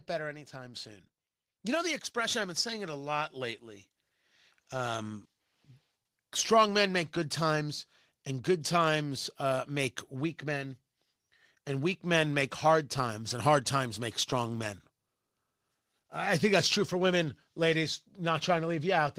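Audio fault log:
2.28 s and 3.3 s, microphone volume stepped up: the speech and the background jump louder together twice, about 4 dB each time, a second apart. That's the call software deciding the mic was too quiet and raising the input volume in single steps.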